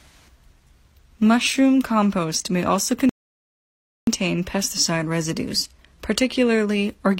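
A speech recording with a rebuffering stall: right after "compost may also" at 3.09 s, everything drops to silence until 4.07 s, then picks up cleanly on "pesticide residues". The player starved for data and waited, so nothing's missing, but about 0.98 s of dead air got added.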